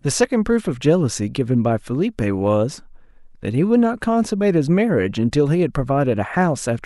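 No technical faults can be heard anywhere in this speech recording.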